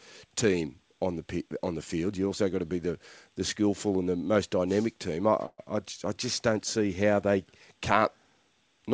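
A call audio freeze runs from 5.46 to 5.60 s, right after "most dynamic team I" and before "I I just don't". The speech stops and the last sound is stretched into a fading buzz for about 120 ms, ending in roughly 40 ms of silence. The likely cause is delayed packets draining the jitter buffer. Nothing is lost: the speech resumes where it paused, about 120 ms later, still band-limited to 8 kHz as a G.722 call.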